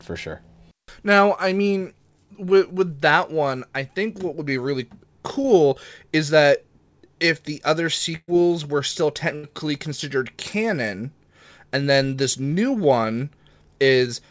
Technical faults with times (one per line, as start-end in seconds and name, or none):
5.42-5.46 short concealed packet loss
8.16-8.30 burst of packet loss
9.36-9.45 burst of packet loss